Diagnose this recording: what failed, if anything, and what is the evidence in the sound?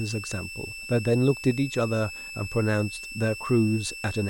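Switching supply whistle throughout the speech, a thin tone wandering between about 2.6 and 2.7 kHz, roughly 15 dB below the voice: a power supply running in audible burst mode or beating with another one, leaking into the analogue path.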